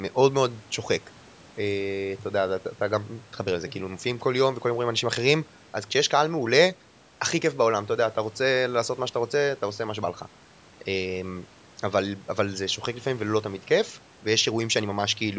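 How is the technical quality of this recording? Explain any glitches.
No glitches or faults heard.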